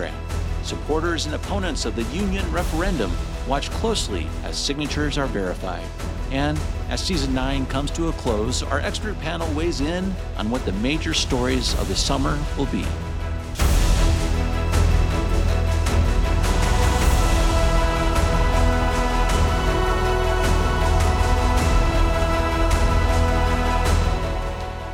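Nothing here calls for a fault report, since there's simply nothing wrong to point to anywhere in the audio.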